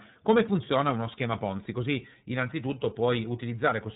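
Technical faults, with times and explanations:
Throughout, iLBC codec: nothing passes above 3.8 kHz, so the speech sounds narrow and boxy. Each 30 ms frame is coded on its own, without help from the frame before. This leaves a plainly audible rough, synthetic grain. The coarseness fits the 13.33 kbps mode.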